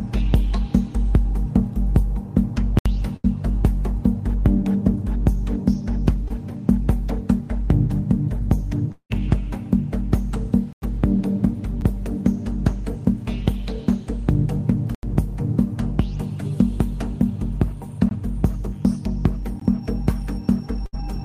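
At 2.79 to 2.86 s a block of digital silence, about 70 ms, cuts the sound out, typical of an output buffer not filled in time. At 3.16 to 3.26 s a burst of packet loss leaves about 75 ms of held, fading continuation, and about 80 ms of audio is skipped. At 6.28 to 6.32 s a short concealed packet loss smears about 20 ms, with the receiver extrapolating before blending back. From 8.92 to 9.12 s the sound stretches into a fading buzz or hiss, then about 80 ms of silence, before resuming with roughly 180 ms absent; this is likely a long network dropout. Further blocks of digital silence follow: 10.73 to 10.82 s (about 93 ms, which fits a 4096-sample buffer), 11.81 s (a tick of about 8 ms), 14.95 to 15.03 s (about 84 ms), 18.09 s and 19.60 s (each about 18 ms). At 20.86 to 20.95 s another burst of packet loss gives about 70 ms of fading fill, with about 80 ms skipped.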